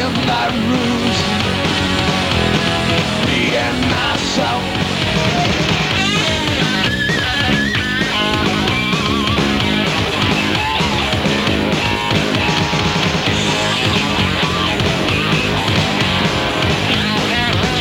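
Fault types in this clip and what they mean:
Hard clipping: the signal runs about 6 dB too hot for a stage to pass, so peaks flatten, adding crackle on loud moments across roughly one percent of samples.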